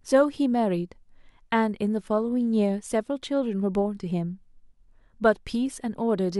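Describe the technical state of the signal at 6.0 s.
At 6.0 s the speech signal is intact, with no audible fault at that moment.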